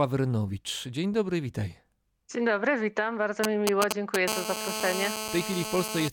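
A speech recording with two kinds of mobile-phone interference. Right after "dobry witam bardzo", from 3.44 to 4.16 s, GSM signalling bursts cut in as a galloping run of ticks and short 217 Hz buzzes, louder than the speech itself. A nearby 2G handset keying up in brief radio bursts is being rectified by the audio circuitry. From 4.28 to 6.08 s this becomes a steady GSM phone buzz: a hard, harmonic-rich 217 Hz rasp about 5 dB below the speech, consistent with the same phone now transmitting continuously in a call.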